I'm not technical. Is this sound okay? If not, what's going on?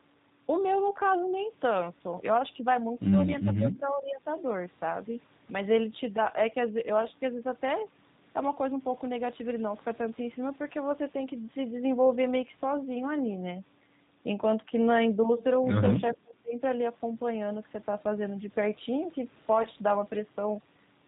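No. The whole recording runs through the G.729 codec, a low-rate phone-call compression that rebuilds the voice from a simplified model of the throat and mouth. Nothing above 4 kHz survives, so the speech sounds muffled, slightly rough and artificial throughout.

Near the end, from 19.63 to 19.67 s, there is VoIP packet loss concealed by the speech codec. A short chunk of data, about 20 ms, went missing. The decoder filled the gap by stretching the preceding sound into a brief buzzy tone or coloured noise that fades.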